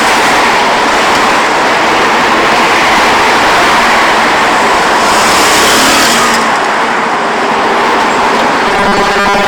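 From the start, every loud moment carries a harsh, gritty fuzz. This is hard clipping: the signal is driven about 13 dB past what the chain can pass, so around a fifth of the samples have their peaks sliced flat, spraying high harmonics across the spectrum.

From 8.68 s to the end at 9.47 s, the audio turns into a rigid, metallic buzz fixed at 200 Hz. This is robotic sound from repeated short buffers, likely caused by the same 5 ms stretch being replayed while roughly half the real audio is skipped.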